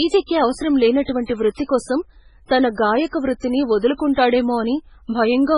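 From start to finish the speech sounds watery and swirly, with metallic chirping on s sounds, smeared consonant attacks, and nothing above 10.5 kHz. The damage is heavy and is likely MP3 compression at a very low bitrate, near 16 kbps. Starved of bits, the encoder cut the treble at a fixed point and zeroed weaker frequency lines, which flicker on and off between frames and produce that warbling texture.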